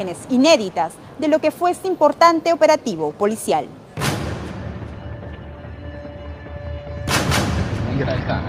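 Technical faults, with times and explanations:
Nothing here points to a technical problem; the audio comes across without any faults worth noting.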